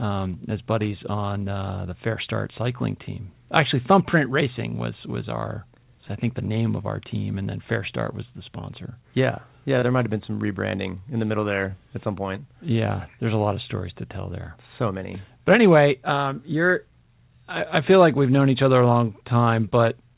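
At 9.79 to 9.85 s, before "might have been some", the speech briefly smears: short concealed packet loss, with 30 ms missing and the decoder stretching the preceding sound across the gap.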